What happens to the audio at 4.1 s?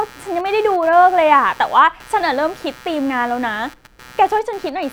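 At 4.1 s a low, rasping buzz sits under the speech, pulsing at around 150 times a second and well below the level of the voice. It isn't confined to that moment: it runs through the whole clip and rises and falls independently of what is being said. This is computer activity noise. Shifting load on the processor, graphics card or mouse disturbs the ground shared with the audio circuit, and those current swings leak into the signal.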